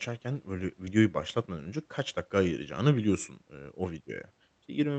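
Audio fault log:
0.85–0.88 s, short concealed packet loss: about 20 ms arrived too late, so the decoder stretched the preceding speech to bridge it, leaving a brief smear before "başlatmadan önce kaç dakika".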